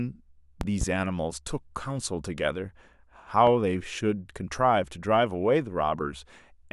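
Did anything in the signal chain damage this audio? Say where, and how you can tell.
Yes. Voltage steps in the analogue wiring, likely from a plug or switch, caused loud pops: a double one at 0.61–0.85 s, about 15 dB up, and another at 3.47–3.51 s, about 10 dB up, with the speech continuing underneath.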